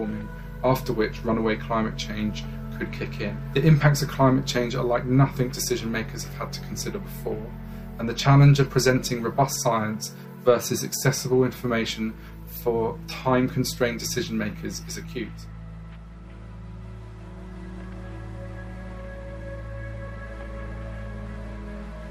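Nothing stood out on listening to the audio.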